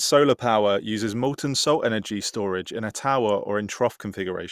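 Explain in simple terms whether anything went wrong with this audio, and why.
Nothing went wrong; this speech recording has no faults.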